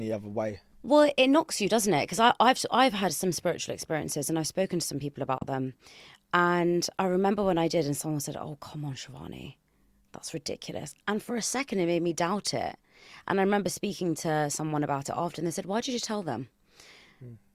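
Speech, with one abrupt silent gap from 5.38 to 5.46 s before the sound resumes further on, likely a Bluetooth dropout where late wireless packets were discarded.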